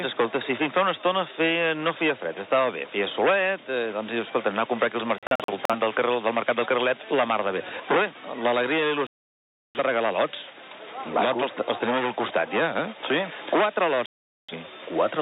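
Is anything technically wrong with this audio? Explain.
Yes. The audio has three digital broadcast dropouts. From 5.18 to 5.75 s the sound breaks into several short holes, the longest about 43 ms, losing about 0.21 s in total. From 9.07 to 9.79 s it goes silent for about 0.68 s, and from 14.06 to 14.54 s for about 0.43 s. The receiver lost valid frames and muted until good ones returned, so whatever was sent during each gap is gone.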